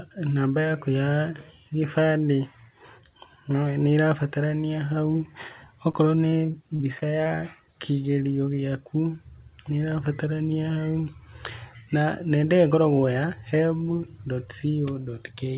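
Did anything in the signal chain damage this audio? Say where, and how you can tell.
Yes. From 5.92 to 7.27 s, just before "kĩgerio gĩaku", the speech turns choppy and robotic: repeated packet loss in the network, with seven short holes patched by stretching earlier sound.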